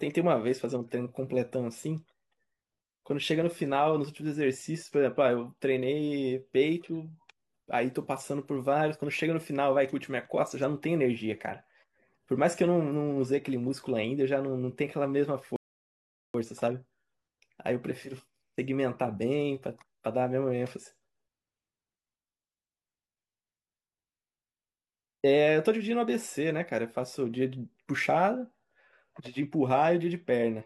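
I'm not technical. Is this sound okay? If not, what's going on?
No. At 15.56 seconds the speech suddenly goes silent for about 0.78 seconds, then picks up at exactly the word where it stopped, so nothing is missing. This is a rebuffering stall: the player ran out of downloaded audio and paused until more arrived.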